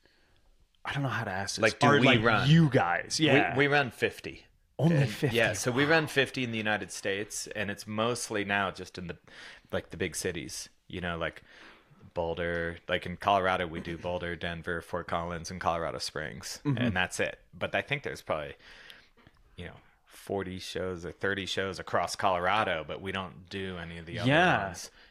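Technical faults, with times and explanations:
No technical faults.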